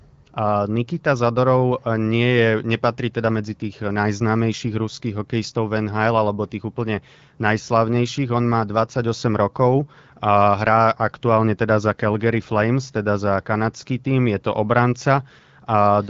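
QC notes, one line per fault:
No faults are heard in this speech clip. The AMR wideband (HD Voice) codec path shows in the band limit, with nothing above 7.5 kHz and only a light coded texture, which fits its 12.65 kbit/s mode.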